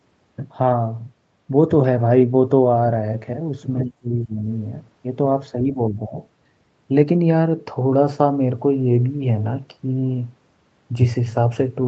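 Speech suppressed in double talk at 3.84–4.45 s and 5.74–6.18 s, where the speech dips by roughly 30 dB and then about 10 dB, likely an echo canceller attenuating the talker during overlap.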